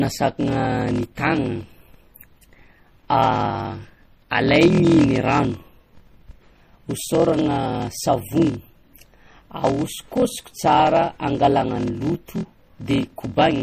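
Block size mismatch (padded) runs throughout this speech clip: a buzz at 41.7 Hz and speech running slower at 0.889 times normal speed, which fits 1024-sample blocks written into a stage reading larger ones, with each shortfall filled by zeros. MP3 compression, also throughout, is the likely cause of the plainly audible watery, swirling artefacts and smeared attacks, along with nothing above 15.3 kHz, which points to a low bitrate around 40 kbps that left too few bits for the weaker frequency components.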